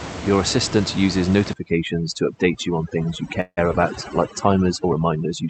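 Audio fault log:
1.53–5.49 s, overdone noise removal: Starting right after "assistant uses" and running to the end, noise reduction set far too aggressively strips the room noise, which sat only about 10 dB under the speech, so it drops and breaks up into twinkling specks. Bands that land near the noise estimate are gated off frame by frame, taking the quieter speech components with them.
3.41–3.59 s, call audio freeze: The speech stalls for about 164 ms. It first carries on as the last sound fading out, then drops to roughly 60 ms of silence, and resumes exactly where it left off with nothing lost. This points to packets held up in transit, likely draining the jitter buffer. The receiver stretches the last sound while it waits, so the gap adds about 164 ms of delay instead of removing audio.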